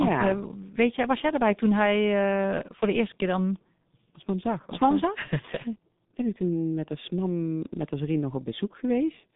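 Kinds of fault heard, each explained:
G.723.1 codec: speech squeezed through a slow, roughly 6 kbit/s phone codec, so nothing survives above about 3.8 kHz, leaving it muffled, hoarse and smeared.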